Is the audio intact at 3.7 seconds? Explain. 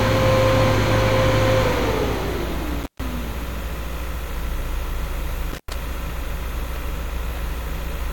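Yes, the audio is intact at 3.7 s, with no dropout, click, distortion or other fault at that moment.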